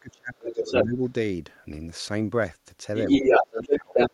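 From 0.0 to 1.0 s the talker is pushed down by as much as about 30 dB, with around 0.7 s of that second affected. This is speech suppressed in double talk: both ends are active, and the echo canceller likely cannot separate local speech from loudspeaker echo, so it attenuates everything.

Between 0.39 and 0.84 s the other side's voice leaks through, sitting roughly 5 dB above the talker. A faint scrap at 1.05 to 1.1 s is far below the speech. This points to incomplete echo removal as the likely cause.

The same pair returns later. Leakage runs from 2.95 to 4.1 s, again somewhat louder than the talker. From 3.23 to 4.11 s the local speech is ducked by about 25 dB while the far end is talking.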